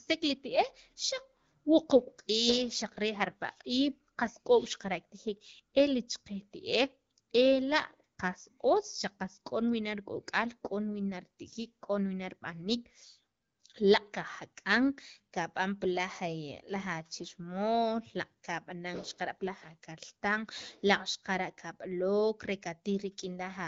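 No technical faults can be heard in this speech recording, which has the band-limited character of the AMR wideband (HD Voice) codec with only light coding texture, consistent with a rate of about 12.65 kbit/s, where speech stays clear.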